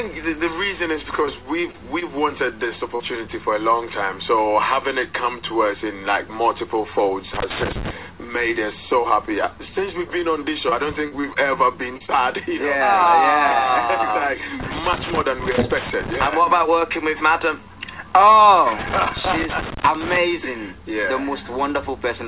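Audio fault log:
1.22–1.25 s, 1.61–1.65 s, 1.71–1.75 s, 1.99–2.03 s, 2.95–3.02 s: short concealed packet loss. Brief smears where roughly 20–40 ms went missing and the receiver extended the preceding sound before rejoining.
7.34–7.91 s, 14.61–16.34 s, 18.79–20.17 s: loose connector crackle. Irregular scratchy bursts, from an intermittent contact rapidly making and breaking the signal.
10.70–11.37 s: repeated packet loss (robotic sound). Choppy stretch with four holes, the longest 37 ms. Each hole is patched by continuing the last sound, and the patches make up about 14% of the span.
11.97–12.02 s, 12.06–12.09 s: short concealed packet loss. Two quick wobbles in the narrowband sound, which has nothing above 4 kHz. Each is a 20–40 ms hole filled by extending the last audio.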